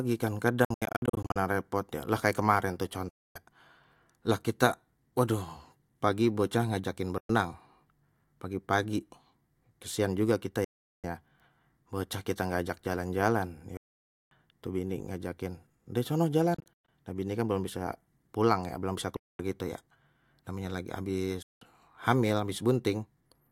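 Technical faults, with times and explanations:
0.65–1.36 s, 3.09–3.36 s, 7.18–7.30 s, 10.64–11.04 s, 13.77–14.32 s, 16.54–16.88 s, 19.17–19.39 s, 21.42–21.62 s: Bluetooth dropouts. The speech cuts to silence with abrupt edges, likely from packets arriving too late and being discarded, then resumes further on as though it had kept playing. Most gaps are single holes of about 0.11 to 0.54 s. The first and sixth instead break up into short scattered gaps.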